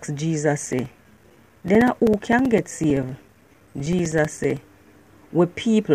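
Periodic USB or driver dropouts from 0.66 to 4.57 s: every 64 ms a few milliseconds go silent, showing as evenly spaced waveform gaps and vertical spectrogram stripes.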